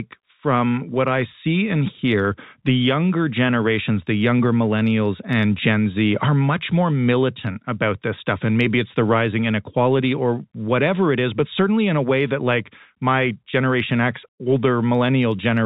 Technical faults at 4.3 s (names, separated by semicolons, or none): none